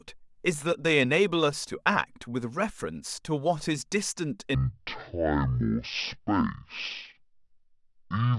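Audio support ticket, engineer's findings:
Speech turns deep and dragging from 4.55 s through to the end, with pitch falling about ten semitones. Section at the wrong speed, played at 0.51x. The editor or player likely ran the segment on a mismatched clock, slowing timing and pitch together.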